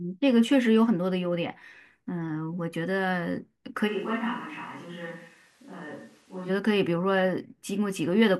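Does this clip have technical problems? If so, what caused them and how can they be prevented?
Yes. From 3.89 to 6.48 s the close microphone's signal was likely lost, causing a switch to a distant microphone. The speech abruptly turns roomy and hollow with less bass, falls roughly 10 dB, and room noise rises to around 30 dB below it, then snaps back. Monitoring the close microphone's feed and securing its cable or wireless link would prevent this.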